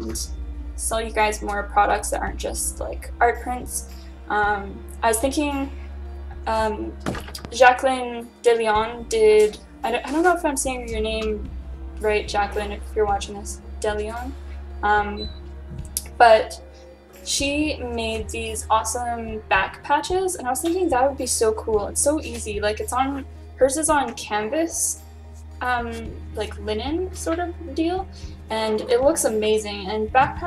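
A voltage spike, likely from a switch, static or a driver glitch, adds a single loud pop from 7.45 to 7.47 s, roughly 10 dB above the surrounding sound.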